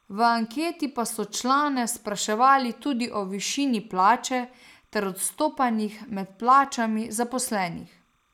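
Timecode bleed runs through the whole speech clip: linear timecode at 30 frames per second leaks in, faint at roughly 45 dB under the voice, as a steady chirping warble. A spectrogram shows two thin, unbroken bands near 1 and 2 kHz.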